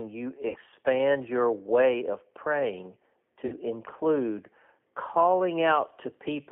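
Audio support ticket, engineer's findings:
G.729 codec, whole clip: speech band-limited to roughly 200 Hz to 3.5 kHz, rough, slightly synthetic texture from 8 kbit/s pulse-excited resynthesis. Spectrogram shows a hard ceiling near 3.5 kHz with an empty region above and a smeared, grainy harmonic structure.

VoIP packet loss concealed by the speech codec, 0.48–0.58 s and 3.46–3.56 s (after "your way of praying"): speech smears into a fading buzzy tone or coloured noise. 60 ms missing, fits three 20 ms packets. Decoder repeats the last pitch and filter at falling gain. Waveform shows a repetitive decaying envelope. Spectrogram shows stretched, fading energy.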